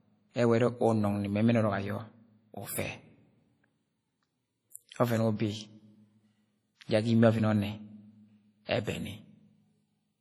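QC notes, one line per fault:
throughout: low-bitrate audio saved at a high bitrate. The speech carries the smeared, watery artefacts of a heavy first encode, likely something near 32 kbit/s such as WMA, re-saved as a roughly 256 kbit/s MP3. The big file can't restore what was stripped, and nothing lies above 20 kHz.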